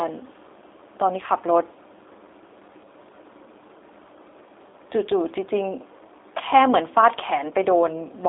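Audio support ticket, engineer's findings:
G.729 codec damage, throughout the speech. Band-limited, slightly rough, synthetic timbre; fits 8 kbit/s G.729A. Mechanism: speech rebuilt from a vocal-tract filter, pitch predictor and sparse pulses. Spectrogram: hard ceiling at 3.7 kHz with nothing above, thin content below 300 Hz. Waveform: smeared consonant transients.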